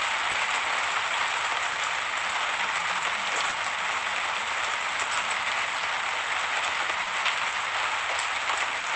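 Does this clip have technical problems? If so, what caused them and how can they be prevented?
Yes. There is clock drift between sender and receiver. The sender's clock runs roughly two percent slow, so the jitter buffer keeps draining and timing hiccups recur. Locking both clocks, or adaptive resampling at the receiver, would prevent this.

There are six short stalls from late packets, at 0.31, 1.72, 3.49, 5.20, 7.03 and 8.80 s. Each time, the buffer ran empty and the last sound was held about 30 ms before playback resumed. Nothing is lost. A slightly deeper jitter buffer, plus correcting the drift that drains it, would prevent these stalls.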